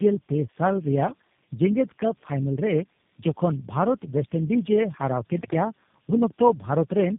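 Throughout, tandem speech coding leaves the speech rough, muffled and warbly, with nothing above 3.7 kHz, which points to several speech codecs in series ending in G.729A. At 5.38 to 5.54 s, an intermittent contact opens for about 119 ms, cutting the sound out with crackle at both edges.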